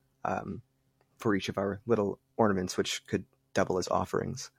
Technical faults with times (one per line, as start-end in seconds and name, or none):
none